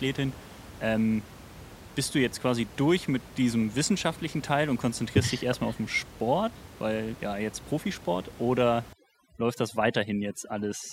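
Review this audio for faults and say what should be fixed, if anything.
Overdone noise removal from 8.93 s to 10.92 s: the suppressor is set too aggressive, switching off frequency bands near its noise estimate, so the room noise (about 19 dB below the speech) collapses into twinkling specks and quieter speech detail vanishes. Lower the reduction depth or raise the threshold so bands are attenuated gently rather than gated off.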